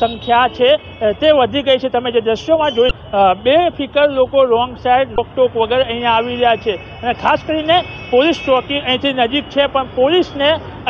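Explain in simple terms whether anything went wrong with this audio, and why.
Two brief glitches, at 2.88–2.91 s and 5.15–5.18 s, come from damaged data in a compressed stream. A few bytes of the file were corrupted, so the decoder misread those frames and had to find its place again, producing a short blip each time.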